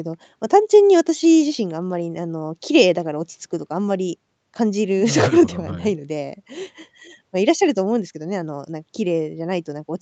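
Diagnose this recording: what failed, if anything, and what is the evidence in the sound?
Nothing failed, and the sound carries no evidence of a fault in any stage of the recording chain.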